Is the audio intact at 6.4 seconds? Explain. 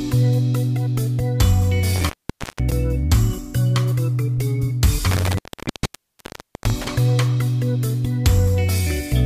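No. At 6.4 s the audio sits inside an intermittent contact fault running from 5.11 to 6.90 s. A loose cable or plug breaks the connection for about 1.28 s. The sound drops out with crackle at the edges, leaving faint hiss.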